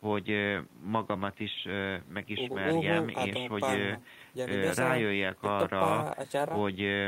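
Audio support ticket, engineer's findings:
No system faults found in the speech signal; the only background is the room's own noise, sitting about 54 dB below the speech, which belongs to the recording rather than the audio path.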